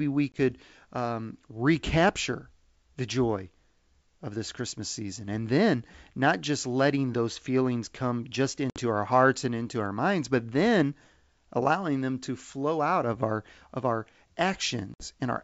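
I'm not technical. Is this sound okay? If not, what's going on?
No. There is packet loss on an ADPCM call: short chunks of speech vanish into silence at 0.32, 8.70 and 14.94 seconds, about one chunk the first time and a few the others. Unlike a simple gap, the speech resumes briefly slightly distorted, settling quickly.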